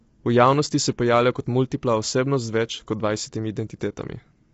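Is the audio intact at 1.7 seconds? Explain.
No. At 1.7 seconds, as across the whole clip, the speech sounds rough and grainy, with noise between harmonics and nothing above 7.8 kHz. This likely comes from low-delay AAC compression, whose short frames resolve pitch poorly, plausibly at a bitrate near 24 kbps.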